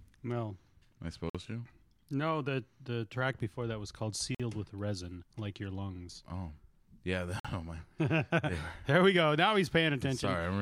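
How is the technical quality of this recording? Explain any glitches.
The speech has three short dropouts. A gap between chunks occurs at 1.30 s, at 4.35 s (right after "before that was called") and at 7.40 s. The audio plays as 3-second chunks with 50 ms of silence inserted at each join, so nothing is lost, but the flow breaks at a regular interval.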